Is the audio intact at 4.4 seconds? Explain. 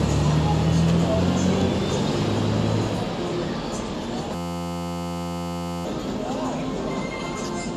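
No. From 4.35 to 5.85 s a system hang loop replays one 11.61 ms slice about 129 times, fitting a frozen 512-sample buffer, as a steady 86 Hz buzz. Unlike a dropout, which falls silent, it holds that tone while about 1.5 s of audio is lost.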